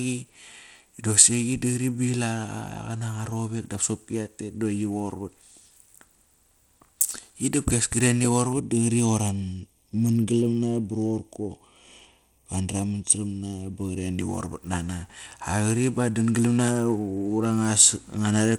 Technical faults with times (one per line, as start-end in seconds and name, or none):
0.00-18.59 Bluetooth SBC compression
8.53-14.18 channel delay (comb filtering)